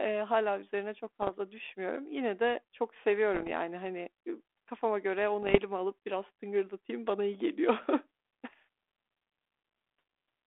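Bit errors on an ADPCM link strike at 1.22 to 1.31 s after "eee hâlâ üzerine çok", at 3.34 to 3.48 s after "de çok", at 5.42 to 5.58 s between "yani hani kafama göre" and "alıp biraz tıngırdatayım bana", and at 8.50 to 8.53 s. Each is a pop followed by a rough, gritty burst with a brief change in level. A flipped bit throws off the decoder's step size and prediction, so the damage rings on for milliseconds after the pop. The sound never drops out or gets patched over as it would with lost packets. The narrow telephone band, which fits a 32 kbit/s G.726 link, stays steady around these bursts.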